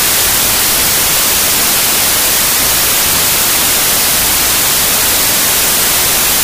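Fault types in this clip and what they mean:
Wrong sample width: Throughout, loud broadband hiss sits over a muffled, dragging version of the original sound, which plays at half speed and so an octave lower. The stream appears to have been written as 32-bit integers but read as 16-bit ones, splitting each sample into two values. The upper halves keep the signal's top bits, while the lower halves become near-random noise, and the doubled sample count halves the playback speed.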